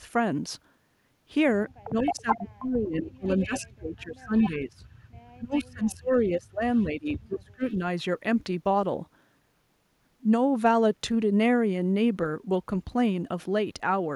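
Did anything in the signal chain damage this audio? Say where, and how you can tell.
Yes, call processing. Speech suppressed in double talk from 1.85 to 4.84 s and 5.38 to 7.81 s: the speech dips by up to about 30 dB and about 25 dB for roughly two and one and a half seconds. The likely cause is an echo canceller turning down its own talker along with the loudspeaker echo. The waveform shows gouged, gapped envelopes, and the spectrogram shows the top end thinning.

Echo leak: a copy of the speech trails by 230 ms at 2.0–2.49, 3.27–4.49, 5.53–6.21, 6.74–6.84 and 7.62–7.76 s. It is strongest first, about 5 dB below the speech, and fades to about 35 dB below. The likely cause is a loudspeaker's echo slipping past cancellation. The spectrogram shows shifted duplicates of the speech's harmonic bands.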